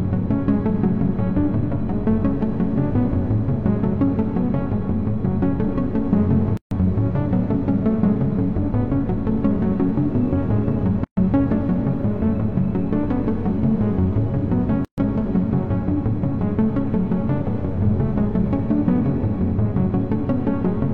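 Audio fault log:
6.57 s, 11.04 s, 14.85 s: gaps at joins of encoded pieces, silences of about 140, 128 and 131 ms where separately encoded segments meet with their encoder delay and end padding left in.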